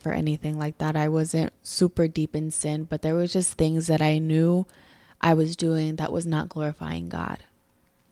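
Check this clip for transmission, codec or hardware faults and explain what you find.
Nothing here points to a transmission, codec or hardware problem; the speech comes across without any dropouts, glitches or distortion worth flagging.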